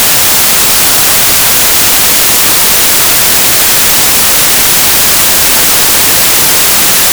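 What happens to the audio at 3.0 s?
At 3.0 s you're hearing samples built from the wrong bytes, which runs through the whole music clip. The reader assembles each sample with its bytes misaligned or swapped, so the jittery low bits end up dominating, and it comes out as loud, harsh broadband noise.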